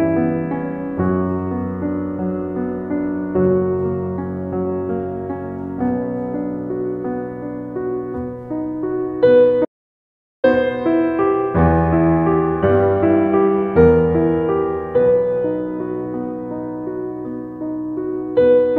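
At 9.65 s the music cuts off abruptly into dead digital silence, with no room tone or decay, and resumes mid-phrase at 10.44 s, so roughly 0.79 s is simply gone. This audio dropout to silence likely came from the input signal being lost while zeros kept being written.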